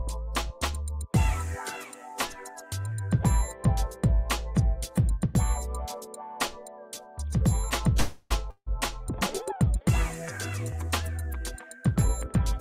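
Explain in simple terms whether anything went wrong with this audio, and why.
Three problems are audible. At 7.99 s the sound stalls for about 0.31 s, turning into a fading buzz and briefly going quiet before resuming at 8.32 s. This is a call audio freeze, likely from delayed network packets. Nothing is lost; the sound picks up where it stopped, just later.

At 8.50 s a similar buzz fills about 0.16 s and ends in a short silence, but this is a long network dropout. Unlike the freeze, about 0.16 s of audio likely never arrives, so when the sound returns at 8.68 s that piece is missing.

From 12.05 to 12.38 s the sound runs about 10% faster without rising in pitch. This is a jitter buffer speed-up: the receiver snips tiny slices, a few hundredths of a second in total, to catch up after a backlog. It sounds hurried rather than cut off.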